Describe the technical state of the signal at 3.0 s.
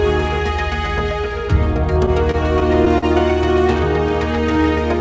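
At 3.0 s the signal is near the end of repeated stalls (stutter) running from 2.06 to 3.04 s. The jitter buffer ran dry five times and the receiver stretched the last sound, up to 42 ms at once, about 105 ms in total. Unlike dropouts, nothing is lost; the audio drags and hitches instead of going silent.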